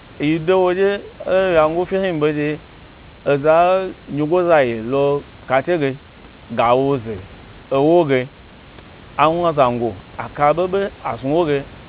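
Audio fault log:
Nothing stood out on listening to this speech: the call path's band limit leaves nothing above 4 kHz, and the room noise sits about 28 dB below the speech.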